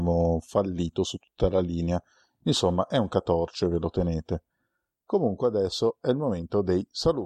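No technical faults are audible.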